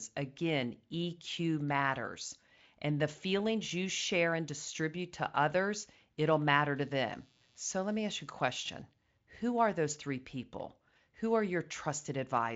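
From 6.76 to 9.18 s, computer activity noise leaks through the ground: a faint buzz roughly 35 dB down, appearing as vertical spectrogram stripes about 150 per second.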